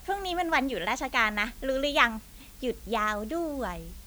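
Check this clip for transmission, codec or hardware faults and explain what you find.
One fault runs through the whole speech clip: low bit depth with dither. It sounds like 8-bit audio. Dither randomises the rounding error, leaving a steady, even hiss about 25 dB below the speech.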